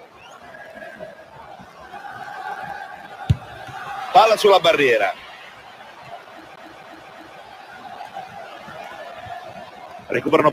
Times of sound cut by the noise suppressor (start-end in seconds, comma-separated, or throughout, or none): 5.51-7.79